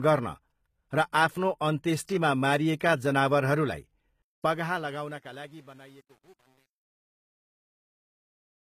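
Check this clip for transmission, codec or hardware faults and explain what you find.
Three faults are present: codec damage across the whole clip, truncation distortion during the closing fade, and one pre-echo on an attack.

Throughout, the treble is rebuilt rather than carried: nothing sounds above 14.9 kHz, and the upper band has a gritty, metallic cast on s sounds. This is likely HE-AAC compression, with band replication copying lower bands upward. The damage is plainly audible, consistent with a low bitrate near 20 kbps. Unlike plain lowpass dulling, the top is present but synthetic.

From 4.22 s to the end, the fade loses resolution. It is worst from 4.85 s onward, where the tail turns gritty and stepped. The level stage is rounding to too few bits without dither, which fits about 9 bits. Unlike codec noise, this grit tracks the falling level rather than the spectrum.

At 4.42 s, a short hiss of about 17 ms arrives just before a sharp attack, softening its onset. 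The transform codec spread quantisation noise across its block, filling the quiet moment ahead of the transient. Unlike reverb or echo, the smear precedes the attack rather than following it.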